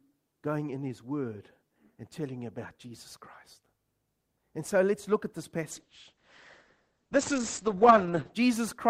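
After "let's look at this", from 5.73 to 8.41 s the speech turns muffled and rough. This is a call bitrate drop consistent with about 9 kbps, cutting bandwidth from 20 kHz to 8 kHz.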